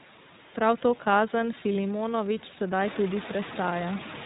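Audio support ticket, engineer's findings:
iLBC codec, throughout the clip. Band-limited to 4 kHz, speech rough and slightly synthetic, damage plainly audible. Each 30 ms frame is coded independently, which fits iLBC's 13.33 kbps mode. The room noise rising by about 13 dB near 3 s is degraded too.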